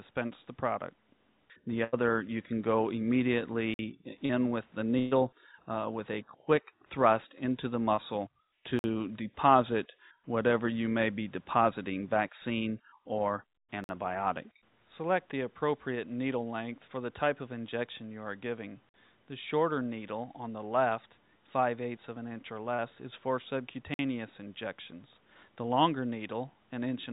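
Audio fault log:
1.84–1.95 s and 4.99–5.13 s, burst of packet loss. Packets arrived too late or never arrived. The receiver stretched the last sound into each gap and let it fade, as a held buzz or a fading hiss. The first fill lasts 85 ms and replaces 80 ms. The second fill lasts 120 ms and replaces 120 ms. The audio then jumps ahead past what was lost.
3.74 s, 8.79 s, 13.84 s, 18.89 s and 23.94 s, gap between chunks. A 50 ms hole of silence falls every 5 seconds. This fits audio handled in 5-second chunks with empty space left at each join. Nothing is lost. The flow simply stops briefly at each boundary.
4.26–4.31 s, 7.95–7.99 s and 22.74–22.80 s, short concealed packet loss. Tiny pieces of audio missed the decoder. The receiver bridged them by carrying the last sound forward, as pitch or shaped noise, then blended back into the real signal. The patches last 36 ms, 20 ms and 40 ms. Each is heard as a brief smear or wobble.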